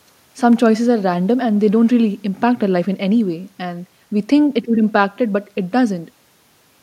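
No technical faults can be heard anywhere in the recording, and the speech signal comes through with its level, timing and continuity intact.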